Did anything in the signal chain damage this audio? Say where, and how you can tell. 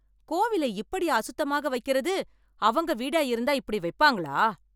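No, nothing in the chain audibly damaged this speech.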